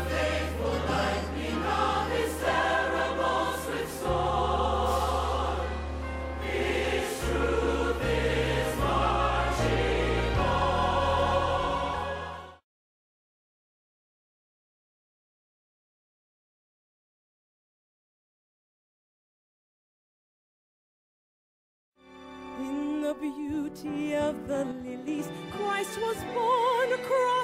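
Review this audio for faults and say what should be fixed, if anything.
One channel drops out from 24.72 to 25.08 s, likely a lost stereo channel, so the mono sum abruptly falls about 6 dB for roughly a third of a second. Secure the stereo connections and check both channels for continuity before the channels are summed to mono.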